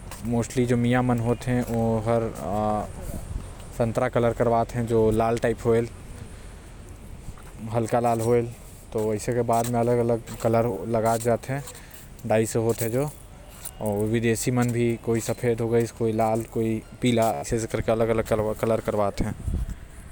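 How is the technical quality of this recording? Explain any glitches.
The recording has one clear glitch, a Bluetooth stutter at 17.34 to 17.46 s. The wireless link dropped or delayed audio packets, and the receiver kept replaying its last short buffer until fresh data arrived. That repeated slice produces a brief buzzing, machine-gun stutter in the speech. When the sound picks up again it has skipped ahead by about 84 ms, which fits roughly six lost frames, as though it had kept playing through the gap.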